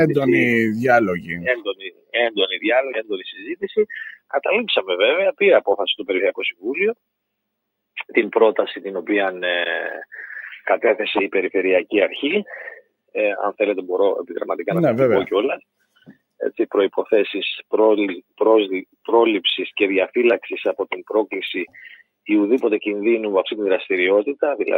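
Across the whole clip the level breathes up and down by roughly 5 dB, with sustained parts sagging while onsets hold their ground. This is a noise suppressor applied to music or sounds, a processor designed for speech that treats steady, held or decaying sound as background noise and keeps nudging it down, so the overall level never settles.

Four moments show sound cut by the noise suppressor much more heavily. From 1.21 to 2.38 s the level caves in by about 22 dB, for roughly a second in total. It dips again by about 17 dB between 2.89 and 3.17 s, then more gently, about 9 dB, from 3.33 to 3.57 s. Each of those two spans about a fifth of a second. At 15.96 to 16.21 s it drops by about 18 dB. Each time the suppressor judged the sound to be noise and clamped it.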